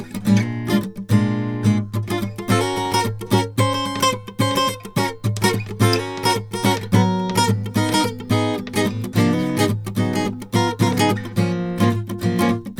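No technical faults are audible anywhere in the music.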